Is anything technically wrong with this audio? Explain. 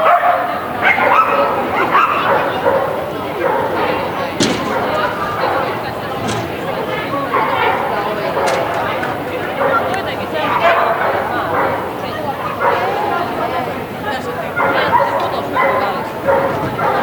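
Yes. Throughout, a steady, thin hiss climbs toward the top of the band, around 25 dB below the signal. This is low bit depth with noise shaping: quantization fitting about 9 bits, with the rounding error pushed upward in frequency.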